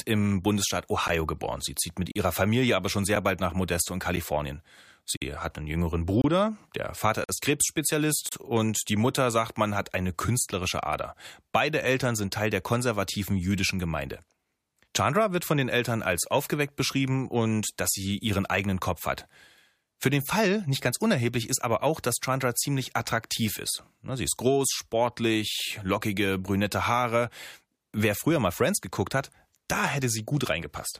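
Short silent holes from a gap between stream segments cut into the speech at 1.08 s, 2.12 to 2.16 s after "zieht mit", 5.17 to 5.22 s before "hat einen jüngeren", 6.22 to 6.24 s, 7.24 to 7.29 s, and 8.29 to 8.32 s before "und die". Consecutive one-second segments leave timing gaps of 14 to 49 ms, which the player fills with silence. No audio is lost, but each gap is an abrupt dropout. The waveform shows flat silent stretches with hard edges, and the spectrogram shows thin blank vertical bands.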